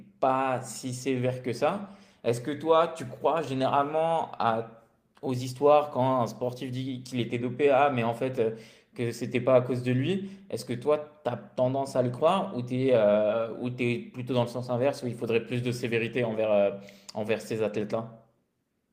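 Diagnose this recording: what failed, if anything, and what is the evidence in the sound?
Nothing in this speech recording points to a failure at any stage of the chain, and the sound offers no evidence of a fault.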